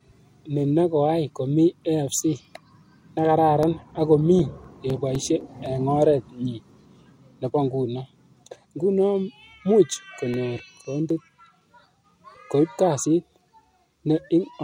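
CD scratch ticks occur from 3.63 to 5.91 s, ending before "oret nyi", and again from 10.34 to 12.62 s: about four brief ticks per second, the longest about 5 ms, where a disc blemish defeated error correction on each rotation.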